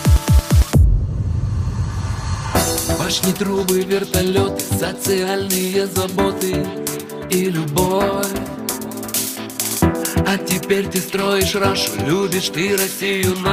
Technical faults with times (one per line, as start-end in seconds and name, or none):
none